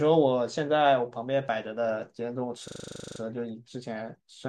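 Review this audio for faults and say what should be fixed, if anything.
From 2.68 to 3.2 s a system hang loop repeats one 40 ms slice 13 times, a 25 Hz buzz: the driver stalled while the hardware kept cycling its ring buffer. Exact, unfading repeats set it apart from loss concealment. Prevent it by never blocking the audio thread.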